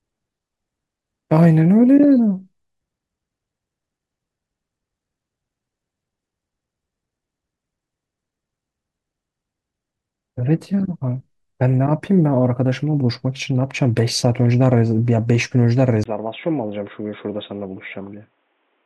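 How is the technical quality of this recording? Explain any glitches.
One glitch, right near the end. At 16.04 s there's a 20 ms dropout, then the speech turns dull and boxy, nothing above 3.8 kHz, a little quieter, with faint new background noise. Likely the input switched to a poorer device with a narrower band.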